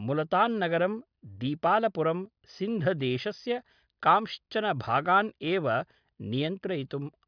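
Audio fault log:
Nothing in this speech recording stood out as a problem on listening.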